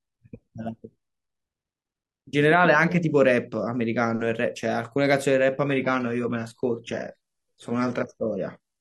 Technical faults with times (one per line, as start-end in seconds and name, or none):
5.64-8.81 adaptive stream at a lower bitrate